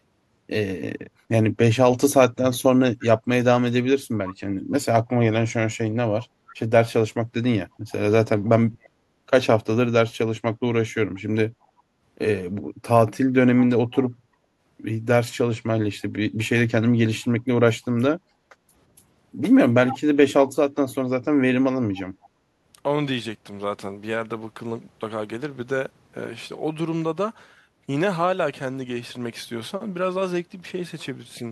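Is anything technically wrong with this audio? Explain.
Yes, there are a few echo-canceller problems in this speech.

From 8.65 to 8.95 s the talker sinks by around 30 dB for roughly 0.3 s. That's speech suppressed in double talk: with both ends active, the canceller likely couldn't separate this voice from the returning echo and pulled everything down.

An echo leak shows up at 13.92–14.1 s, 19.88–19.99 s and 22.22–22.29 s. These are short scraps of the voice arriving about 0.35 s late, likely residue the far end's canceller didn't subtract from its microphone. They sit around 25, 10 and 35 dB below the speech, so the one near 19.9 s is the obvious one.

The background is gated by the echo canceller at 14.21–14.58 s, dipping about 7 dB, and at 18.19–18.69 s, dipping about 10 dB. The canceller clamped the microphone down while the loudspeaker was playing, so the room tone briefly drops away and then comes back.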